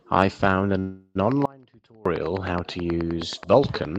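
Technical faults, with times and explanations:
0.79–1.17 s, call audio freeze: the speech stalls for just under 0.4 s while the last sound is stretched into a fading buzz, with a brief dip to silence, and then resumes where it left off, later than it should. The likely cause is packets held up in transit so the jitter buffer ran dry and the receiver filled the wait. On a spectrogram the final frame's pattern smears horizontally and fades, and nothing is cut from the speech, which tops out near 12 kHz on this call path.
1.32–3.98 s, train of clicks: regular ticking at about 9.5 per second runs from here to the end of the clip, heard over the speech and in the pauses alike. Each click is a short, near-identical pulse that peaks well above the speech. The likely source is interference from nearby equipment or a faulty connection or power supply. A waveform shows evenly spaced thin spikes, and a spectrogram shows matching vertical lines spanning the full band.
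1.46–2.06 s, audio dropout to a faint residue: the speech cuts out abruptly for about 0.6 s, leaving only a faint leak of the signal far below its normal level, with the clicks still running over it. The signal was likely lost upstream while the path after the break stayed live, which is why the gap holds a trace of sound instead of true silence. On a waveform the envelope drops sharply to a thin band with hard edges, and on a spectrogram the energy collapses to a dim wash.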